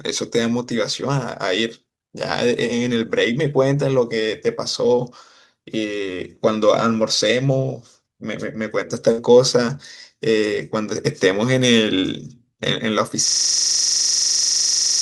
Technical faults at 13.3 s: system hang loop

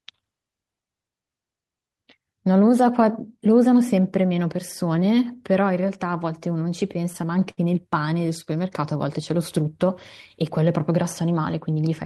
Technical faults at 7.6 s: repeated stalls (stutter)

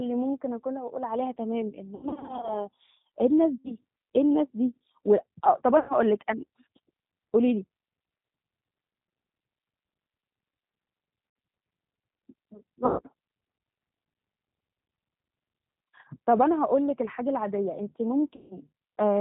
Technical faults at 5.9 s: G.729 codec; VoIP packet loss concealed by the speech codec

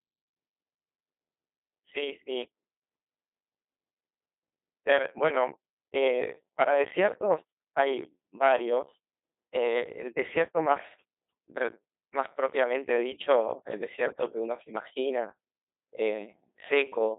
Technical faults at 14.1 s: Codec 2 vocoder; bit errors on digital voice radio

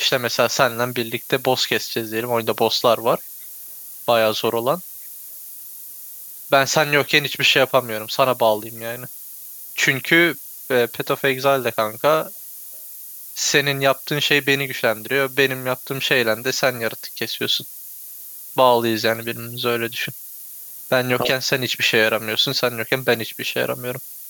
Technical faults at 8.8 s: low bit depth with noise shaping; echo leak

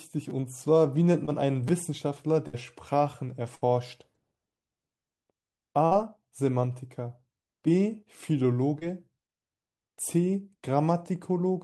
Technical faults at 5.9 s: burst of packet loss

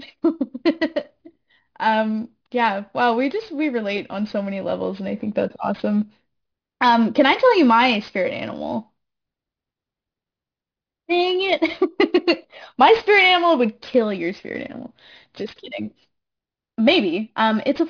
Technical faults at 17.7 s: aliasing

